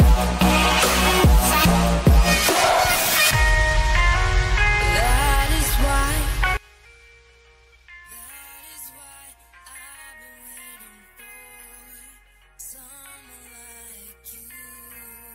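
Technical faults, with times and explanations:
6.57–15.35 s, one channel inverted: the sound drops by about 24 dB to a faint residue, likely because one channel's polarity flipped and the shared content cancels.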